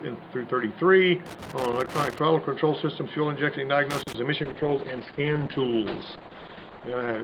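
Two separate problems show up in this audio. First, there's loose connector crackle from 1.26 to 2.18 s and again from 3.90 to 4.15 s: irregular bursts of scratchy crackle, the sound of a worn or dirty contact making and breaking as something shifts. Each break chops the signal, and any DC on the line turns those interruptions into little pops. The first burst runs close to a second; the second is a quick quarter-second. Then at 4.45 s a call bitrate drop kicks in and lasts to the end of the clip. The encoder goes from 48 kbps down to 9 kbps, so the coding gets much coarser, and the bandwidth narrows from 20 kHz to 8 kHz, cutting off the top end. For those last 2.8 s or so the sound goes rough and muffled, with a watery edge, after the connection's bandwidth estimate fell and never recovered before the clip ends.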